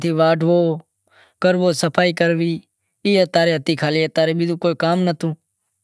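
Speech recording with no technical faults present.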